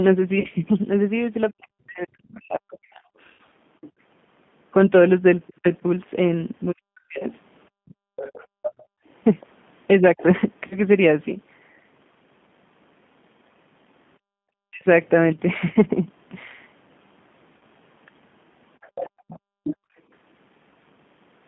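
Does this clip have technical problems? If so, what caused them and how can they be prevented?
Yes. Roughness, line limits, dropouts and an echo-canceller mix-up all come through.

The G.729 codec leaves speech rough and synthetic, squeezed into roughly 150 Hz to 3.5 kHz, because this 8 kbit/s codec rebuilds the voice from a simple vocal model. A wideband codec such as Opus would prevent this.

VoIP packet loss concealed by the speech codec causes brief buzzy, smeared stretches at 0.40–0.47, 3.33–3.41, 10.67–10.80, 15.73–15.76 and 17.57–17.64 s. The decoder filled 20 to 60 ms gaps by extrapolating. A steadier network, a larger jitter buffer or forward error correction would prevent it.

Speech suppressed in double talk makes the voice dip by as much as about 40 dB, in pieces totalling about two seconds between 1.51 and 10.19 s and again at 14.68–14.86 s. It is likely the echo canceller ducking while both sides talked. 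A headset or a better double-talk detector would prevent it.

The other side's voice leaking through adds a second voice from 2.72 to 10.22 s, at around 15 dB below the talker, and from 18.81 to 19.76 s, at around 10 dB below. This is likely residual loudspeaker echo. Headphones or stronger echo cancellation would stop it.

Background gated by the echo canceller makes the room sound drop out by about 36 to 40 dB at 7.70–9.07, 14.19–14.40 and 19.10–19.97 s, as the canceller clamps the microphone while the loudspeaker plays. Gentler suppression, or using headphones, would prevent this.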